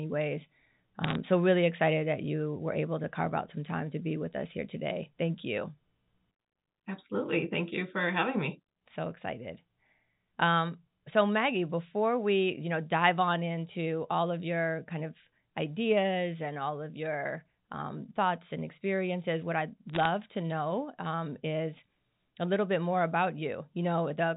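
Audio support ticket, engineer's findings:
Bit errors on the digital phone line: crackly ticks at 1.04–1.15 s before "so really excited that", and 19.89–20.06 s between "and experiences what I'd" and "to know um is". Flipped bits hitting individual samples on the G.711 mu-law line.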